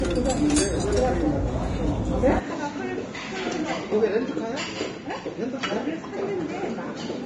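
A recording of everyday sounds, heavily damaged throughout by what is likely Vorbis compression at a low bitrate, around 29 kbps: treble is grainy and hissy, with nothing above 10.6 kHz. From 2.39 s to the end, what is likely an input switched to a poorer device cuts the band to 7.6 kHz, drops the level by about 10 dB, and adds background noise roughly 30 dB down, with no gap at the switch. Unlike the constant codec grain, this change arrives as an abrupt step.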